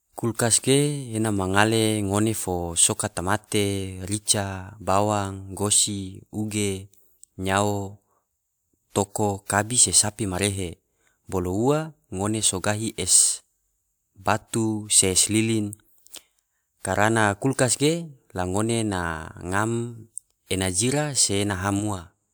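No technical faults can be heard anywhere in the recording.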